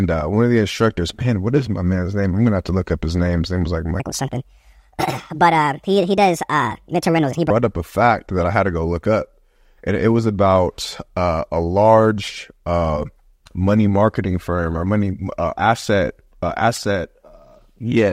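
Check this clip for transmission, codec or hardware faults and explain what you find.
One fault: a section at the wrong speed from 4.00 to 7.50 s, after "name was like" and before "up a fact that". It plays 1.53 times too fast, likely from a clock mismatch, so the speech turns hurried and about seven semitones higher.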